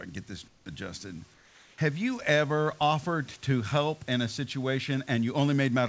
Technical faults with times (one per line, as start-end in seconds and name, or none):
0.48-0.66 comfort noise in place of the background
1.34-1.78 comfort noise in place of the background